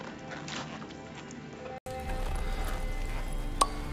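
The input was likely switched to a poorer device for the first 1.86 s. Nothing reaches above 7.6 kHz, so the sound is dull and a few decibels quieter over a faint new noise floor, then clears after a brief 80 ms silence at the switch.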